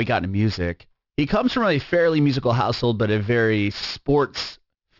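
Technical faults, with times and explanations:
Throughout: aliasing. The speech was downsampled without an anti-alias filter, which fits a 12 kHz rate, so content above 6 kHz folds back as false pitches roughly 20 dB down, making sibilants gritty and metallic. A spectrogram shows energy packed hard against a 6 kHz edge, with mirrored traces below.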